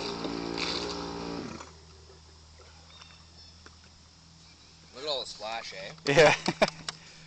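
No technical faults can be heard anywhere in the recording, and the signal holds steady throughout.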